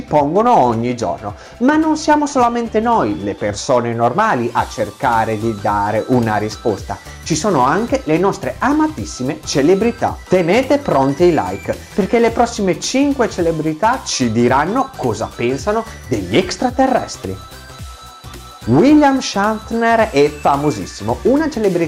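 Hard clipping runs through the whole recording. The signal is driven about 5 dB past what the chain can pass, so around one percent of samples get their peaks sliced flat. Those squared-off tops throw harmonics high up the spectrum, heard as a gritty crackle on the loudest moments.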